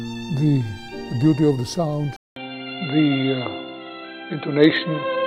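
At 2.16 s the audio drops out for 200 ms. It returns band-limited, with nothing above 4.1 kHz, a duller, boxier tone and a new background noise well below the signal at roughly unchanged level, through to the end. The likely cause is an input switched to a poorer device.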